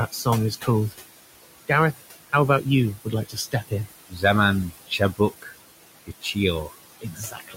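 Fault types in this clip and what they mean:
noise suppressor artifacts: the suppressor pulls the room noise down by about 19 dB frame by frame, so the noise dips between phrases and swells back under speech.
speech cut by the noise suppressor: bits of speech get mistaken for noise and ducked by up to about 19 dB, in five stretches from 0.11 s to the end, sounding swallowed.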